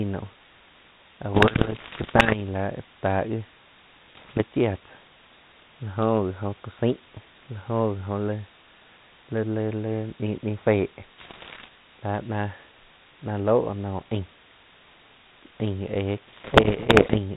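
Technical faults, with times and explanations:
Throughout: low bit depth with dither. The samples are rounded to very few levels, consistent with about 7 bits, and dither is added first, so the rounding error is spread into random noise instead of distortion. The result is a constant, even hiss roughly 20 dB below the speech. It stays at the same level through pauses and loud passages, and the speech itself stays clean-edged, with no grit.
1.34–2.37 s, 4.06–4.42 s, 11.18–11.69 s, 16.26–17.18 s: bit errors on an ADPCM link. Bits are being flipped on the link, consistent with a G.726-style ADPCM connection. Each corrupted bit also throws off the decoder's step size and predictor, so the error rings on for a few milliseconds. These stretches bring pops, rough bursts and brief jumps in level, most dense in the first and longest stretch.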